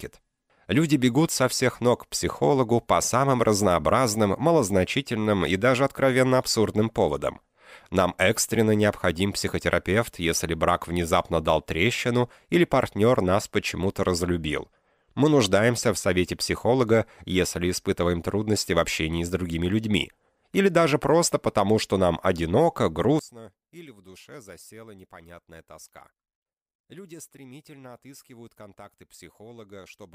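From 23.19 s to the end, the audio drops by about 23 dB when heard in mono. What was centred nearly vanishes. Only a faint residue remains. The likely cause is one channel inverted, so the shared content cancels when the two channels are summed.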